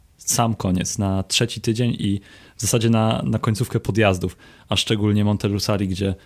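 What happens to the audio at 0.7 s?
Nothing goes wrong at 0.7 s; the speech there plays through intact, with no dropout, click, distortion or other fault.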